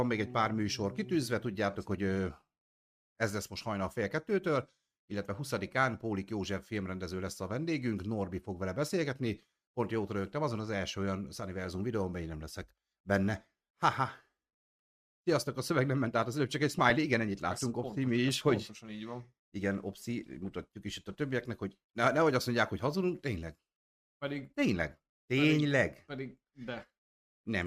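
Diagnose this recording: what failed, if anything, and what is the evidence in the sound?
The failure is DAB burbling, at the broadcast reception and codec stage. Between 16.70 and 16.90 s the speech is overlaid with short blips of noise. Weak reception let bit errors slip past error correction into the MP2 data, so corrupted samples put noise blips into single sub-bands. Unlike a network dropout, nothing goes silent or repeats. Isolated frequency bands flare briefly, which points to a short run of damaged frames.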